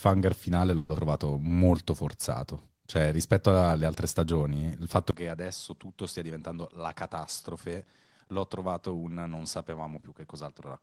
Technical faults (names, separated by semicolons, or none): long network dropout; jitter buffer slow-down; input switched to a poorer device; jitter buffer speed-up